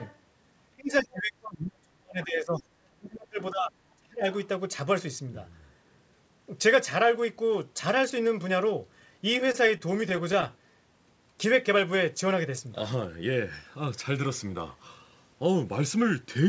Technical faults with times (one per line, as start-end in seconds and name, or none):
0.00-0.18 other side's voice leaking through
0.73-4.26 speech suppressed in double talk
2.56-2.63 other side's voice leaking through
9.52-10.51 repeated stalls (stutter)